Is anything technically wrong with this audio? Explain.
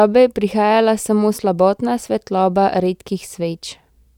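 No, nothing technically wrong can be heard in this speech recording. There is no moment in it that calls for a fault to be pointed out.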